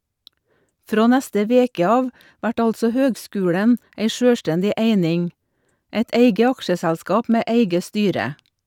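Nothing goes wrong anywhere in this recording; there's simply no fault to point to from the first moment to the last.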